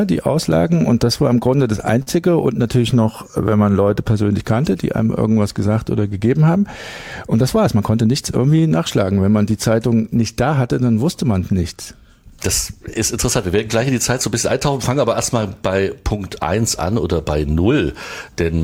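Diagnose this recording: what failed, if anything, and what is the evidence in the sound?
Network side, at the receiver: there's a short stall from a late packet at 2.02 to 2.10 s. The jitter buffer ran dry, so the last bit of sound got held for about 45 ms until the packet showed up. Nothing's skipped; it just hangs briefly.

Same jitter buffer, now doing a slow-down from 3.12 to 5.55 s. It's rebuilding its reserve by repeating tiny pitch-period-sized slices, so the audio runs at about 95% speed with unchanged pitch. That stretches things by 123 ms, with a drawn-out feel.

Then the opposite, a jitter buffer speed-up from 7.43 to 8.48 s. The buffer had too much queued and trimmed short pieces repeatedly to cut the delay, roughly a tenth of a second in all. The sound runs at about 110% speed and feels hurried, but the pitch stays put.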